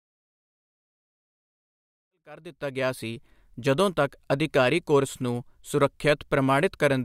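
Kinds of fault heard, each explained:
No technical faults are audible anywhere in this speech.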